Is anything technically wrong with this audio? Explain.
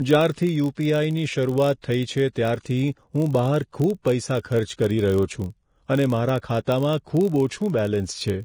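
Yes, three faults are audible in this speech clip.

Vorbis compression, throughout: the treble is coarsely quantised, which points to heavy, low-rate coding, likely Vorbis at around 30 kbps. The codec keeps a smooth spectral envelope but approximates the fine detail on top of it so roughly that the detail turns into noise of similar energy. The result is hissy, grainy high frequencies, roughened tones and softened consonant onsets.

Filter restarted on every block, throughout: a processing filter discards its internal state at each block boundary and begins again from silence, so every block opens with a small transient. These recur at 46.9 Hz, which fits a 1024-sample block. They merge into a low, steady buzz under the speech that grows louder and quieter with the level of the speech.

Pre-echo, 4.42 to 4.45 s: a sharp attack falls late in a transform block, and the quantisation noise, scaled for that loud onset, is spread across the whole block, including the quiet stretch before it. 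A short hiss therefore arrives about 30 ms ahead of the attack, and the onset itself sounds smeared rather than crisp.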